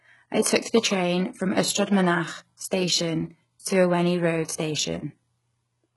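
Speech runs throughout with a treble that sounds bright but synthetic: s sounds come out gritty and metallic, and nothing sits above 11.5 kHz. This is likely HE-AAC compression at a very low rate, around 12 kbps. The heavy damage comes from spectral band replication copying lower bands upward, which is why the treble is present but wrong rather than simply dulled as with a plain low-pass.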